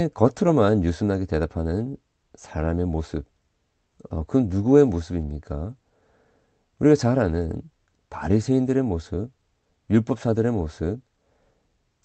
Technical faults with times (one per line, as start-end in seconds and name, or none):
none